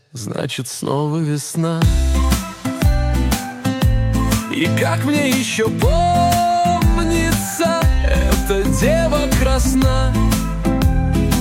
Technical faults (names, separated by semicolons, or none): mains hum